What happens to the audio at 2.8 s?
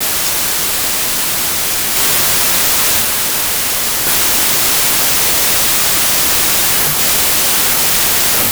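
At 2.8 s, as across the whole clip, a wrong sample width is audible: 32-bit samples read as packed 24-bit, so the byte groupings misalign. The speech sinks into loud noise at 0.75 speed and lowered pitch. The waveform is dense noise-like hash, with faint, downward-shifted harmonics on a spectrogram.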